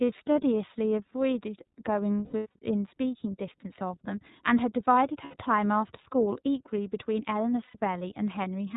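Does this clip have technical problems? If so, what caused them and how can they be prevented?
Yes. The speech runs through the iLBC codec throughout. It is band-limited to 4 kHz and sounds plainly rough and synthetic. Each frame is coded on its own, and the frame length points to 30 ms frames at about 13.3 kbps. Prevent it with a wideband codec such as Opus.

Lost iLBC frames occur at 2.25 to 2.57 s, 5.24 to 5.37 s and 7.65 to 7.77 s. The decoder repeats the last pitch cycle with noise, so each gap becomes a held, buzzy vowel. The first gap is scattered, with the longest run around 100 ms. Prevent it with forward error correction and a steadier network path.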